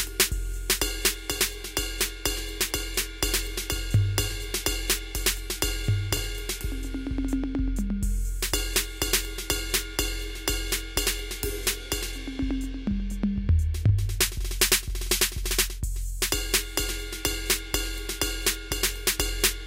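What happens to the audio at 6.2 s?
At 6.17 s the music drops out for about 3.8 ms in a block of digital silence: a run of samples replaced by zeros, likely because the output buffer was not filled in time. The abrupt cut and return produce a single sharp tick.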